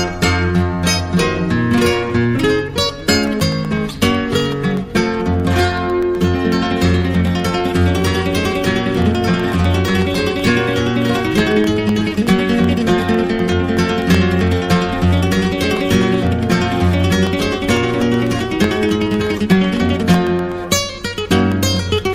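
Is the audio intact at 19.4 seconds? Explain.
No. From 3.15 to 22.02 s, periodic USB or driver dropouts occur: something blocks the audio path every 0.125 s, and about half a millisecond is replaced by silence each time. At 19.4 s this is heard as a steady tick running through the sound.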